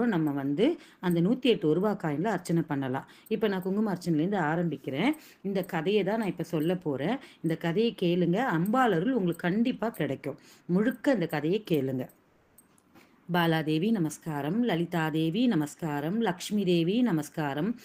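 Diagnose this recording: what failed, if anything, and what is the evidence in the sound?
From 12.27 to 12.57 s, about 300 ms, the real background gives way to comfort noise: a smooth, featureless hiss about 2 dB quieter, where the background sits about 39 dB below the loud passages. This likely comes from codec discontinuous transmission, such as Opus DTX, with the receiver synthesising noise during the pause.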